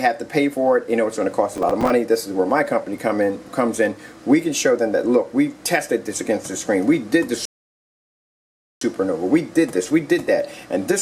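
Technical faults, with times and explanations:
1.53–1.90 s, processor overload crackle: a gritty burst of crackle rides on the sound for under half a second. It points to tiny buffers of around 5 ms repeatedly missing their deadlines, around fifteen times. Each miss replays a scrap of old audio with hard edges, so the skips pile into tearing until the load eases.
7.45–8.81 s, rebuffering stall: the sound drops to silence, then picks up exactly where it stopped. Playback ran dry of downloaded audio and waited for more to arrive. Nothing is skipped, but about 1.36 s of dead time is inserted.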